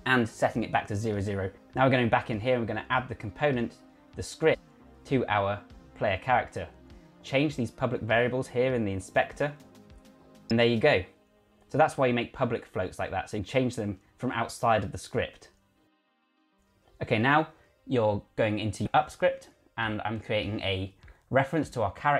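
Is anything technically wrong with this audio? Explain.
Yes. There is damaged data in the compressed stream at 4.53–4.55 s, 10.50 s, 13.38 s, 16.84 s and 18.86 s. Corrupted bytes make the decoder misread frames and lose sync until it finds the next header, producing brief chirps or blips.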